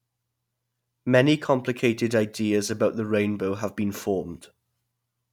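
A short bit of speech, and nothing technically wrong turns up anywhere in it.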